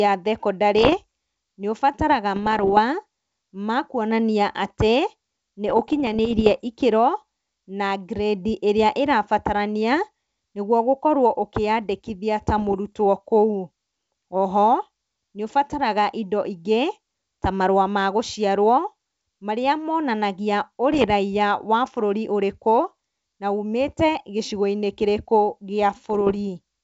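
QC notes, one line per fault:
0.79–0.95 s, 2.36–2.79 s, 5.68–6.62 s, 12.58–12.75 s, 20.93–21.06 s and 26.10–26.37 s: bit errors on an ADPCM link. Each spot brings pops and gritty, rough bursts with brief jumps in level, the longest around 6 s. Flipped bits, at rates near 0.4 percent to one percent, corrupt the adaptive step size and predictor as well as individual samples, so each error keeps distorting for milliseconds. The damage sits on top of clear wideband G.722 sound.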